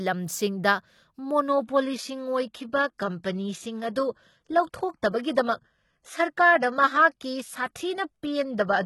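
A speech recording where, from 1.48 s to the end, an adaptive stream at a lower bitrate takes over: the treble abruptly thins with no gap, which points to a drop to a low-bitrate HE-AAC-style encoding. A spectrogram shows content suddenly ending at 11.8 kHz, while the waveform stays continuous.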